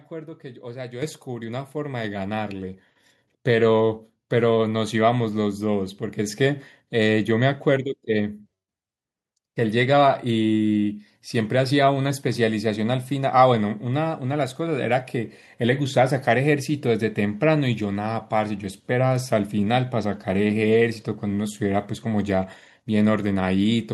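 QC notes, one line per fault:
1.02 s, 2.04 s, 3.06 s: microphone volume stepped up. The call software judged the input too quiet and raised the device's microphone gain three times in single steps, by about 7 dB, 4 dB, then 3 dB. Speech and background jump louder together at each step, so the clip climbs in a staircase rather than a smooth rise.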